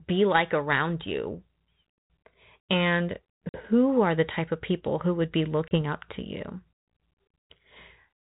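At 3.49 s the speech drops into a hard-edged silent hole of about 50 ms, a few packets' worth, and resumes by 3.61 s on "who are the type". This is packet loss on an ADPCM call. The decoder's adaptive predictor and step size lose track of the sender's, so the speech returns with brief, slight distortion. At 5.68 s, after "people who would be", a shorter 30 ms gap repeats the effect before "up to you".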